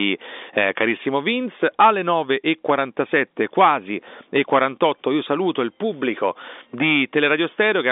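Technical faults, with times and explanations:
Nothing stood out on listening beyond the narrow sound of ordinary G.711 telephone coding, which passes nothing above about 3.6 kHz.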